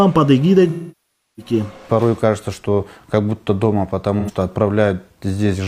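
From 0.69 to 1.52 s, AAC frame loss with concealment: a long run of frames went missing (enough to fit roughly sixteen) and the decoder stretched the last good spectrum, so the sound smears into noise, decays toward silence and fades back. A spectrogram shows blurred, featureless energy thinning out, and the waveform envelope sags. A second, brief loss at 4.19 to 4.31 s, about two frames, gives only a short phasey, noisy smudge.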